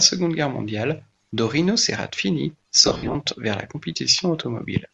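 Throughout the speech, a transform codec likely working at a modest bitrate, with Bluetooth LC3 compression at around 48 kbps and 10 ms frames fitting what is heard, discards much of the upper spectrum and fills it with noise. This gives the speech a plainly audible breathy, grainy edge.

From 2.83 to 3.15 s, just before "vers la", lost LE Audio frames leave about 210 ms of gaps scattered across that stretch, the longest around 70 ms. The decoder patches each gap by reusing the previous spectrum with scrambled phases, so the sound turns into a noisy smear.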